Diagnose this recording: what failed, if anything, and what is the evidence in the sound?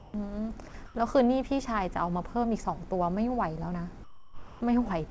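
Four short stretches of speech give way to a flat, steady hiss: 0.00 to 0.14 s, 0.68 to 0.74 s, 0.86 to 0.95 s, and a longer gap from 4.04 to 4.61 s. The fault sits in call processing, likely sound dropped by the voice detector. The sender's detector took the sound for background and stopped sending, and the receiver, on a G.722 path with nothing above 8 kHz, played comfort noise until the detector triggered again.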